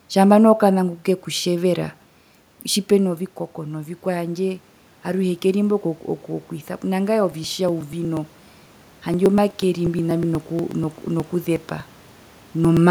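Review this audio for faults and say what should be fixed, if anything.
From 7.32 s to 12.77 s there are periodic USB or driver dropouts: around fifty ticks every 0.121 s, each skipping a few milliseconds of speech outright. Give the audio driver a larger buffer or track down the background task that is periodically stalling the USB bus.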